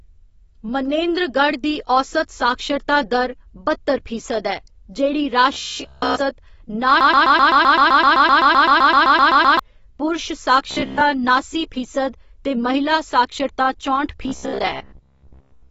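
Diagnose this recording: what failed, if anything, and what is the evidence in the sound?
The speech is dull and band-limited throughout, with nothing above 7.6 kHz. Sibilants sound smeared and fizzy. This is the codec stage. The damage is plainly audible and most likely comes from AAC compression, AAC-LC at a low bitrate around 24 kbps, which discards high bands and coarsely quantises the rest.

From 5.53 to 6.20 s, 10.71 to 11.02 s, and 14.23 s to the end, a rigid metallic buzz at 66.8 Hz appears. This is robotic sound from repeated short buffers, likely in the driver or buffer stage. A period of about 15 ms is being replayed, entirely in the first span and mostly in the later two.

From 7.01 to 9.59 s, a 128 ms fragment repeats exactly, back to back, about twenty times. That is a broken-record loop. The likely cause is a stalled player or stream that kept resending its last fragment. 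The audio that belonged in those 2.6 seconds is lost.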